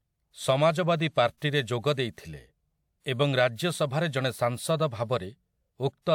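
Pre-echo runs from 1.37 to 1.42 s, just before "ଯୋଗ ଦେଇଥିଲେ". A sharp onset in the speech lands late within a transform block, and the codec spreads the quantisation noise for that whole block evenly, so noise scaled to the loud attack also fills the quiet gap ahead of it. The result is a short hiss of about 45 ms creeping in before the onset, which makes the attack sound softened and smeared rather than crisp.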